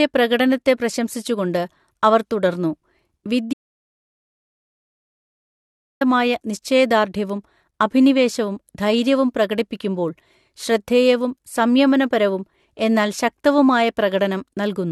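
At 3.53 s the speech cuts out mid-flow and the audio drops to silence, with no room tone, until 6.01 s, returning on "നിശ്ചയദാർഢ്യവും അഭിനിവേശവും ധൈര്യവും പ്രകടിപ്പിക്കുമ്പോൾ". This audio dropout to silence removes about 2.5 s of content, likely from a lost input while the recorder kept writing silence.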